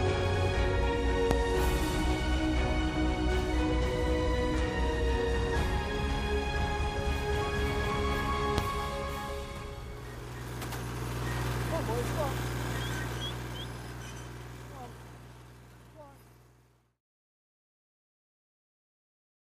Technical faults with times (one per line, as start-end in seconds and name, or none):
1.31-1.34 loud pop
8.58-8.61 loud pop